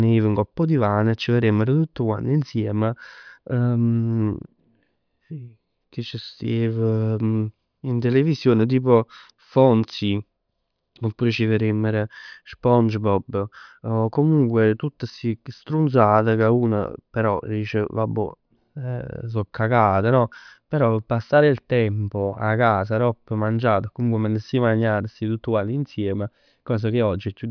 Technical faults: none

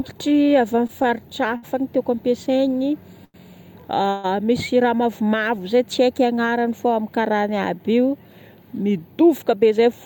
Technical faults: repeated stalls (stutter); short stall from a late packet; call audio freeze; jitter buffer speed-up

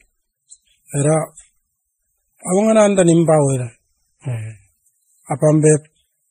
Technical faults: transcoding between lossy codecs

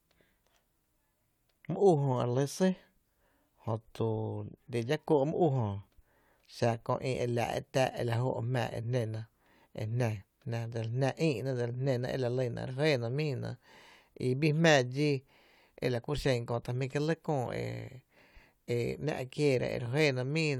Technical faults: none

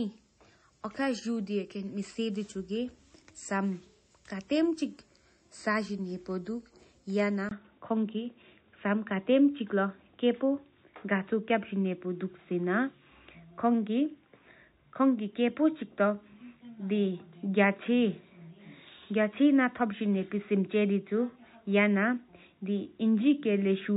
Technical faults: low-bitrate audio saved at a high bitrate; input switched to a poorer device

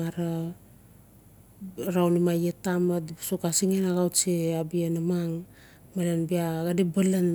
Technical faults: block size mismatch (padded)

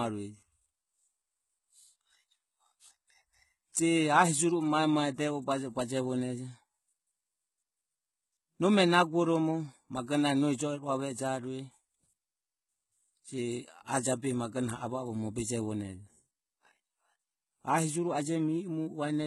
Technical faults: HE-AAC compression

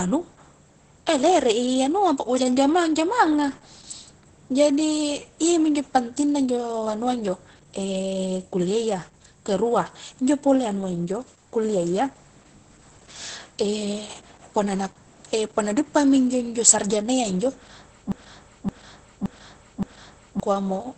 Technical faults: Opus voice compression; broken-record loop

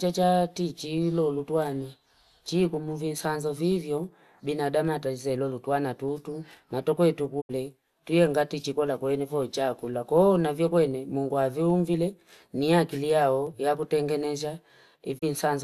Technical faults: digital broadcast dropout

